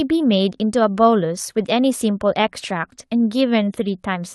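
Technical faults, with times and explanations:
1.59 s, lost packet rebuilt from error correction: a 20 ms stretch of rougher, noisier speech with no gap, which fits one dropped Opus packet being replaced by the low-bitrate backup copy carried inside the packet that followed it.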